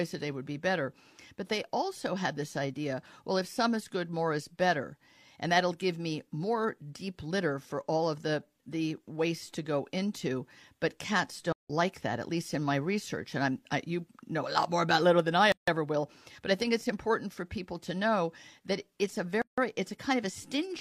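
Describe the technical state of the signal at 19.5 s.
There's a gap at a join of encoded pieces at 19.42 to 19.58 s: a gap of about 160 ms where separately encoded segments were stitched untrimmed, so the speech stops abruptly, then resumes mid-flow.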